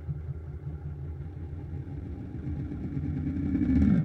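From 1.17 s to the end, periodic clock jitter sets in. The converter clock wobbles around 2 kHz, adding sidebands that give high sounds a rough, metallic edge.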